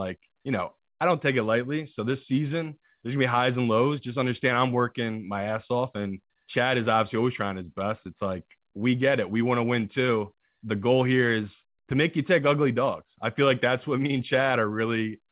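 No faults are audible in the speech; the band stops at 4 kHz, the narrowband ceiling expected of a WebRTC call path using a codec such as G.711 A-law, not a defect.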